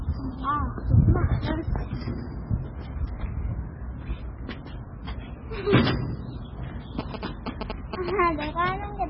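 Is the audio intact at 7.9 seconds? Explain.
No. From 6.99 to 8.10 s, GSM signalling bursts from a nearby 2G phone are rectified into a galloping dit-dit-dit of short buzzes at about 217 Hz, roughly as loud as the sound. Throughout, nothing is present above 5.5 kHz and the audio sounds watery and smeared, likely from heavy MP3 compression at a very low bitrate such as 16 kbps.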